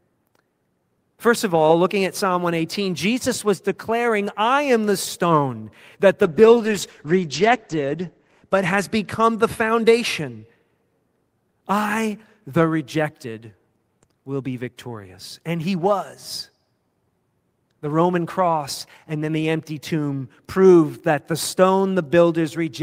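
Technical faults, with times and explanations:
6.25–10.47 s, call bitrate drop: the encoder got squeezed, so the speech turns coarse and watery and the top end narrows from 20 kHz to 8 kHz, sitting at its worst for 1.79 s. That fits a fall from 32 to 11 kbps before things recover.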